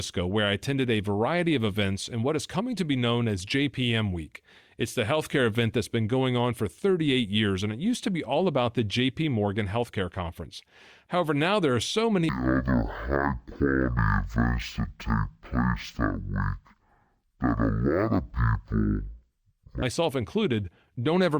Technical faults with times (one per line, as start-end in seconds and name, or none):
12.29-19.82 stereo read as mono